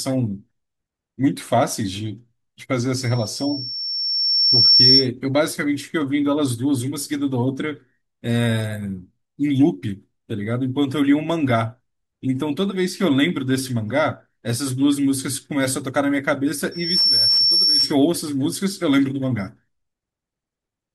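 At 2.99 s a loudspeaker feedback squeal at 5.4 kHz swells over roughly a second and a half to about 10 dB above the speech, lasting until 5.08 s. The mic is hearing its own speaker, and that one frequency runs away. It returns from 16.71 to 17.95 s, jumping up much faster and sitting about 5 dB over the speech.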